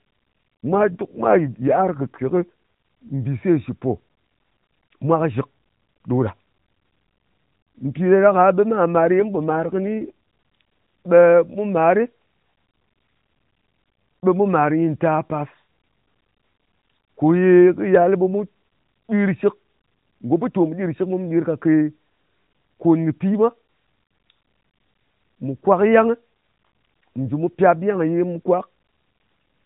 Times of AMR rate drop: 0.66-2.49, 9.16-10.11

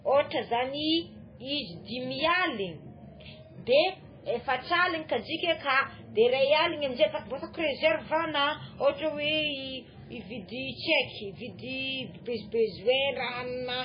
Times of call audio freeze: none

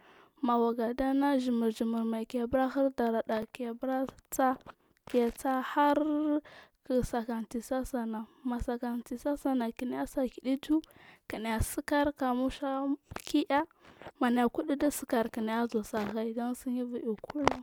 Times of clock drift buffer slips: 3.42-14.50

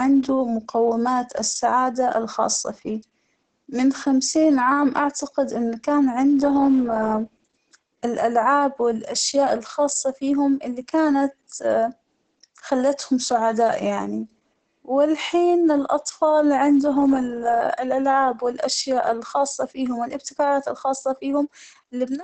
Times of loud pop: none

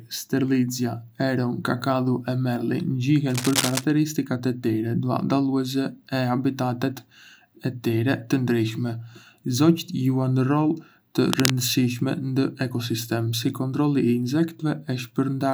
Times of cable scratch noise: 3.29-3.84, 11.30-11.54

